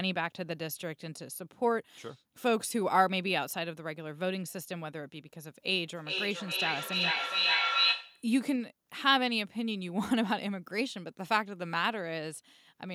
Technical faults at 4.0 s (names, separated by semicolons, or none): none